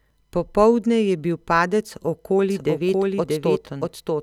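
A speech clip in which, from 2.50 s to the end, every sound is followed by a second copy roughly 0.7 s later, at about the same loudness as the first. The late copy is full-band and dry, with no decay or room colour, and it appears abruptly rather than fading in. This is a doubled audio track, likely caused by the same signal being picked up again through a slower path or by an edit that left two offset copies layered together.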